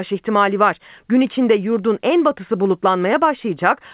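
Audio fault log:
No faults are heard in this speech clip. Its mu-law telephone coding at 8000 samples a second can be heard as expected, with nothing above 4 kHz and a quantisation noise about 38 dB under the signal that follows its level.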